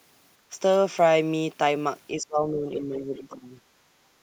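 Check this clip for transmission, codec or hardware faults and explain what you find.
Two echo-canceller faults show up here, both tied to the far end's loudspeaker signal.

Background gated by the echo canceller, at 0.38 to 0.50 s and again at 3.84 to 4.22 s: the room tone sinks by about 10 dB and about 11 dB, then comes back. The canceller clamps the mic hard while the loudspeaker plays, taking the ambience down with it.

Speech suppressed in double talk, from 2.2 to 3.54 s: the talker's speech dips by roughly 15 dB in patches across well over a second. That's likely the canceller failing to separate local speech from loudspeaker echo while both sides talk, so it turns everything down together.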